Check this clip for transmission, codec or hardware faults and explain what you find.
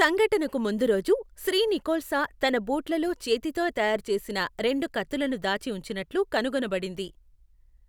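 One fault turns up: a single dropped-samples click at 7.05 s. This is likely caused by roughly two samples going missing, so the waveform jumps abruptly. That shows as a thin vertical spectrogram line.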